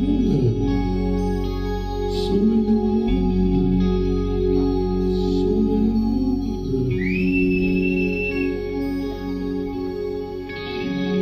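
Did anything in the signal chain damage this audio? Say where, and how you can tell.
No, nothing stood out on listening that would point to damage at any stage of the signal chain.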